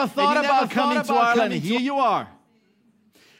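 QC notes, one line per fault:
0.00–1.78 s, doubled audio track: a full-band copy of the speech, about 5 dB quieter, trails roughly 0.7 s behind with no decay or room colour, likely from a slower capture path; the spectrogram shows each pattern repeated later, ending abruptly at 1.78 s.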